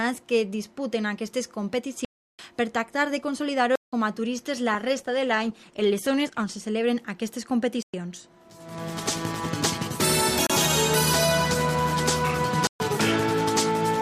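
The output buffer was likely left unfilled five times, producing blocks of digital silence at 2.05 to 2.39 s, 3.76 to 3.93 s, 7.83 to 7.94 s, 10.47 to 10.50 s and 12.67 to 12.80 s. Each time the audio drops straight to silence and returns with no fade. The longest hole, about 341 ms, fits a 16384-sample block, and the 171 ms one fits 8192 samples. The gap near 10.47 s lasts about 30 ms. Between 4.74 and 6.73 s the connection's bandwidth estimate fell, producing a call bitrate drop. The encoder was pushed from a high rate down to what sounds like around 15 kbps and stayed at its lowest for about 1.9 s. Over that stretch the audio is coded coarsely, loses its top end and sounds muffled and watery until the rate recovers.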